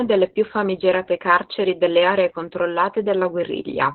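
Opus voice compression affects the whole clip, from start to finish. The speech has no content above about 4.2 kHz, which points to the codec running in narrowband SILK mode at a very low rate, around 8 kbps. SILK models the voice with linear prediction and codes the leftover excitation coarsely, so the speech sounds muffled, hoarse and somewhat robotic, with heavy codec damage throughout.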